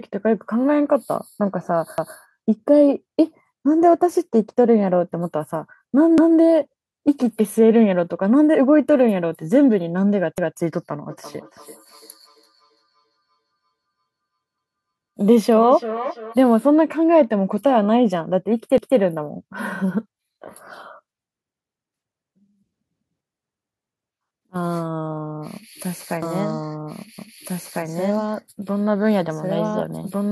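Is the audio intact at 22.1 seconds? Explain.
Yes, the speech at 22.1 seconds comes through intact, with no audible dropout, distortion or other fault at that moment.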